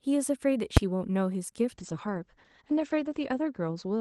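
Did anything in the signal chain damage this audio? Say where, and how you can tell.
Yes, two spots. At 0.77 s there's a single very loud bang. That's invalid numbers at full scale in the processing or sample-format conversion stage: a calculation produced infinite or invalid values, and they were clamped to the largest possible sample value. The block is only about 5.33 ms long, which fits a 128-sample block, so the loud start and end merge into one crack rather than two pops with a gap.

From 1.73 s to the end, the sound gets rougher and more muffled. That's a call bitrate drop on the network side feeding the codec. The Opus call path begins with highs reaching up to 12 kHz, then the top end pulls back to 8 kHz and the coding turns coarse and watery. That fits the bandwidth estimate falling and the encoder being pushed from around 32 kbps down to about 11 kbps. It stays at its worst for roughly 1.42 s and doesn't recover before the clip ends.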